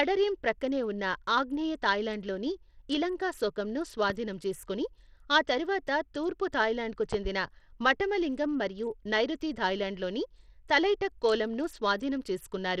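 Speech throughout carries plainly audible Bluetooth SBC compression, likely from a low bitrate near 80 kbps. Unlike smoother perceptual codecs, the damage comes from a few broad bands: treble flickers in and out, with gritty noise and aliasing over the voice. A loud pop lands at 4.10–4.14 s, after "ఉన్న ఆగ్నేయ థాయ్లాండ్లోని ఇలంకాశోకంను", and a double loud pop at 7.13–7.29 s, after "ఆ తర్వాత తూర్పు థాయ్లాండ్కు". Each peaks roughly ten decibels above the speech, likely from a voltage step such as a plug, switch or static discharge. Unlike a dropout, the speech continues unbroken beneath the thumps.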